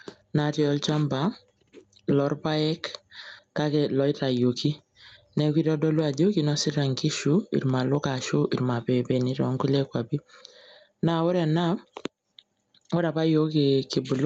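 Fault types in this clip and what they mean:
Gain pumping: the level is squashed throughout the speech, with loud and soft parts pulled closer together as the gain swings by around 10 dB, likely because the input gain is far too high and a fast limiter keeps clamping it down. On a waveform the peaks sit flattened against a near-constant ceiling. On a spectrogram the speech sits entirely below the call band's 8 kHz top edge.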